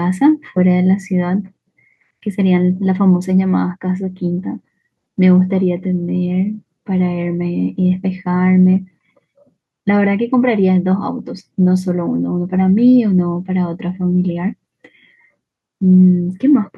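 No technical faults can be heard.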